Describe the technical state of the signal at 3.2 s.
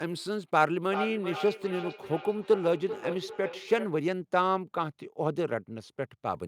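At 3.2 s the signal is inside a stretch of feedback echo between two devices running from 0.82 to 4.09 s. A second device in the room replays this microphone's audio, the microphone picks it up again, and no echo canceller covers that path. The sound returns about 0.4 s later, thinner and ringing, peaking about 7 dB below the direct sound. A spectrogram shows each burst repeated at that spacing with narrowed bands, and the waveform shows trailing copies after each envelope.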